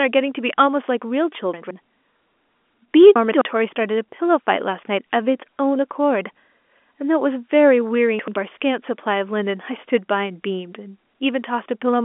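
At 1.54 to 1.71 s, 3.16 to 3.41 s and 8.19 to 8.36 s the speech jumbles briefly, with chunks out of order. The audio seems to move in blocks of about 85 ms, and one block lands late: one slot behind in the first and third spots, two in the middle one. Nothing goes missing, but each spot gets a short scrambled stutter at the hard joins, all over a band-limited telephone line that tops out near 3.8 kHz.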